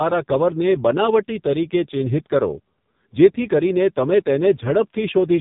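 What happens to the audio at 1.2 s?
At 1.2 s the speech is in the grip of an AMR narrowband mobile codec, present for the whole clip rather than starting there. The codec rebuilds the voice from a vocal-tract model excited by sparse pulses in 20 ms frames, and the heavy, buzzy, synthetic roughness suggests a very low bitrate around 6 kbps. Nothing passes above 3.8 kHz. A plain low-pass filter would sound dull but clean; this sounds dull and artificially buzzy.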